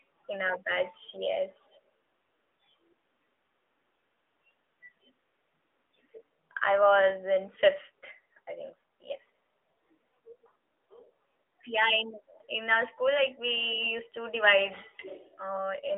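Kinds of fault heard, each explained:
AMR narrowband mobile codec: speech squeezed through a mobile vocal-tract model, audibly buzzy, with a spectrogram showing a hard ceiling near 3.8 kHz and a thin 300 Hz floor.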